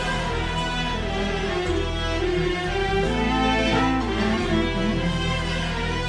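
No technical faults are audible.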